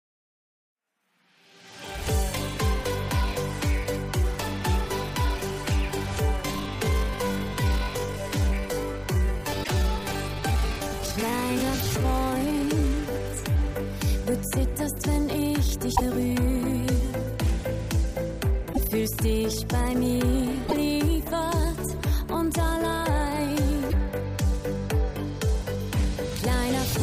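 From 6.42 to 13.58 s there is a time-stretched section. The pace drops abruptly to about 0.68 times normal speed, while the pitch holds steady. The sound has a dragging quality. The likely cause is software lengthening the passage to fill a set duration. It preserves pitch by repeating short slices of the audio. Normal pace returns at 13.58 s.

Damaged data in a compressed stream appears five times: at 9.60, 15.92, 18.69, 20.65 and 23.86 s. The first falls inside the stretched section. Each event lasts roughly 70 to 100 ms. Each is a short chirp, squawk, click or hole. Bytes in the compressed stream were lost or corrupted there. The decoder misread those frames, lost sync, and jumped ahead to the next valid frame header.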